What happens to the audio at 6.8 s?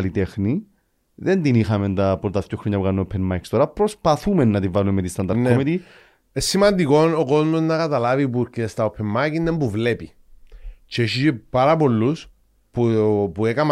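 At 6.8 s the speech carries clock slip clicks, faint ticks about every third of a second from 0.34 to 13.66 s, likely from unsynchronised clocks (about 100 ppm) dropping or repeating single samples. On a spectrogram they show as thin, evenly spaced vertical lines.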